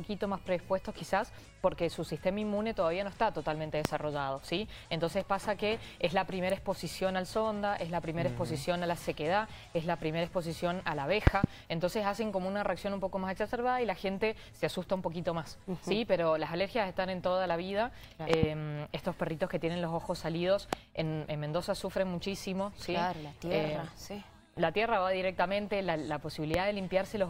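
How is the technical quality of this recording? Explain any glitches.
The recording is marred by five loud pop events. A sudden voltage step, likely from a plug, switch, static discharge or driver glitch, was added to the signal. The circuits after it shaped that step into a sharp transient, heard as a pop roughly 25 dB above the sound, which continues underneath. Single pops fall at 3.85–3.88 s, 20.73–20.75 s and 26.54–26.57 s, the last about 20 dB up. Quick double pops occur at 11.27–11.46 s and 18.34–18.46 s.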